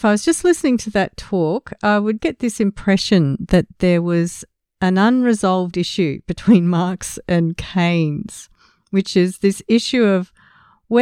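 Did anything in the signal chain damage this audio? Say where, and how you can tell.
No, nothing in the chain audibly damaged this speech, and no stage leaves a mark anywhere in the recording.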